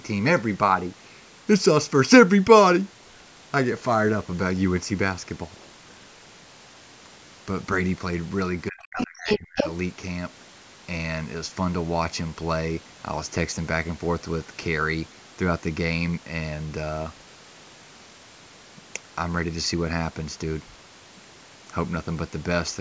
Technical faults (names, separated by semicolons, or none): speech suppressed in double talk; other side's voice leaking through